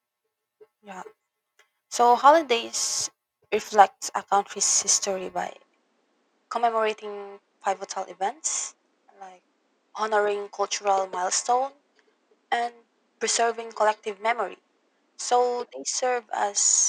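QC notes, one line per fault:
5.48 to 16.89 s, input switched to a poorer device: speech abruptly loses everything above about 9.3 kHz and picks up a faint new noise floor, about 45 dB down, with no gap or level jump, likely a mid-recording change to a narrower-band microphone.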